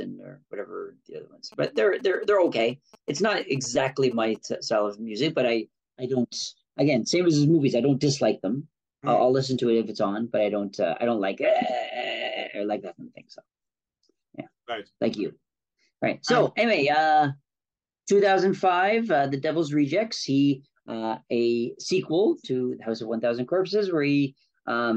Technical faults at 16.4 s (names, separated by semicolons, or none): none